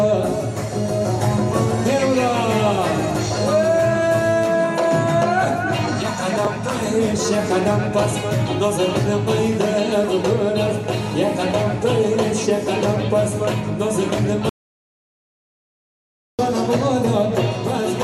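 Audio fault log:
4.43 s and 6.83 s, bit error spike: a single sharp tick at each point, three samples long, where the value leapt by a power of two and snapped straight back. That's why it's so short and broadband and has nothing to do with the surrounding sound.
14.49 to 16.39 s, audio dropout to silence: the sound cuts off mid-flow and about 1.9 s of silence follows, with no room tone at all, before it picks up again. It's likely the input dropped while the recorder kept writing zeros, so that stretch is simply gone.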